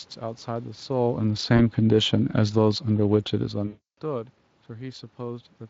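Automatic gain falling begins at 1.35 s and continues to 4.32 s. The gain control judged the input too loud, or its background noise too strong, and stepped its gain down gradually, by about 5 dB in total. The level starts full and then sinks slowly over those three seconds. The room noise underneath sinks with it, which is how this differs from a talker simply moving back from the microphone.

VoIP packet loss concealed by the speech codec first appears at 1.57 s, a 20 ms gap consistent with a single lost frame. The decoder filled it by extrapolating from the last pitch and spectral shape, so the voice briefly smears rather than dropping out. A much longer loss runs from 3.67 to 3.96 s, 300 ms, which points to about fifteen consecutive frames missing. Here the concealment stretches the sound into a fading, extrapolated fill, and because each frame builds on the one before, the voice stays thin or distorted for a short while after packets resume. 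The Speex coding heard throughout adds only light damage.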